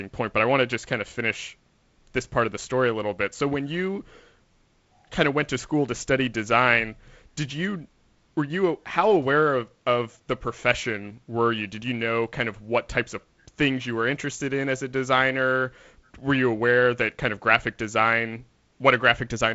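No faults can be heard; the speech passes through G.722 wideband telephone coding, with content reaching up to about 7.7 kHz and nothing above, and a light hiss with a slightly grainy low band that fits the coder running at its reduced 48 kbit/s rate.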